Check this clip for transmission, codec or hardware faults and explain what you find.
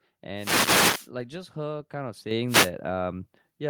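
One fault is present, a microphone volume stepped up event. At 2.31 s the level jumps by about 6 dB in a single step. The call software judged the microphone too quiet and raised the device's input volume at once. Speech and background noise both get louder together, with no fade.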